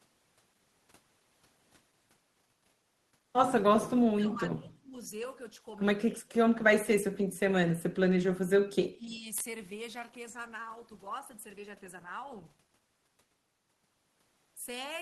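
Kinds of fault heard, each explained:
Speech suppressed in double talk: the speech dips deeply, about 30 dB, in four patches. An echo canceller likely muted it while both sides talked.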